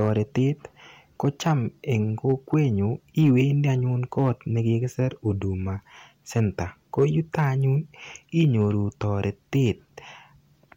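All the way through this speech clip there's mild hard clipping. The signal is being pushed about 3 dB past what some stage in the chain can handle, so the loudest peaks get sliced flat. Only a small fraction of samples, well under one percent, actually hit the ceiling. Those squared-off tops throw extra harmonics high up the spectrum, and you hear them as brief crackle riding on the loudest moments rather than constant fuzz.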